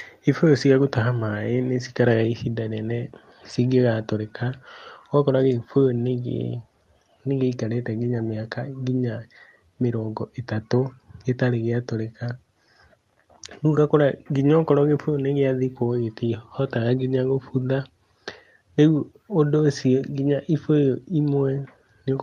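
No faults are audible in this speech; it carries the ordinary coding texture of a call path and a top end that stops at about 12 kHz, consistent with Opus at a moderate call bitrate.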